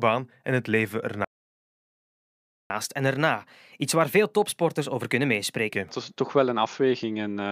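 Speech runs normally until 1.25 s, when the sound cuts out completely. The silence lasts about 1.45 s, until 2.70 s. This is a playback stall. The output simply stops in mid-flow rather than fading. The player most likely ran short of data or had its audio thread blocked, and it could only resume once it recovered. When the sound returns at 2.70 s, it picks up again and moves straight into a catch-up at higher speed. From 2.70 s to 5.70 s the speech plays 1.1 times faster than normal. Because the player resamples the backlog to gain that speed, the pitch rises too, by about a semitone and a half. The result is a slightly hurried, higher-sounding stretch. At 5.70 s only part of the lost time has been made up, and speed and pitch drop back to normal.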